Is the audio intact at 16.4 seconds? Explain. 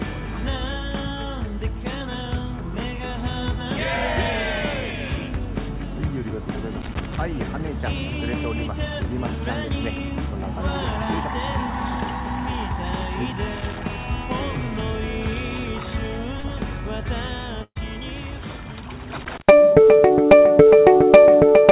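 No. From 16.40 to 16.47 s there is a short concealed packet loss: about 40 ms of audio never reached the decoder in time, and the receiver extended the preceding sound for about 35 ms before blending back, heard as a brief smear or wobble within the 4 kHz-limited call band.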